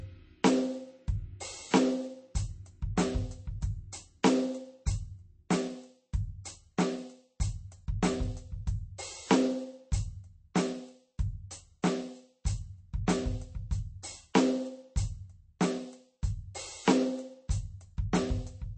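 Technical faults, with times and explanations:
Throughout, MP3 compression: the music has nothing above 8.3 kHz and plainly audible watery swirl, likely a starved encoder around 32 kbps trimming treble and dropping weak detail.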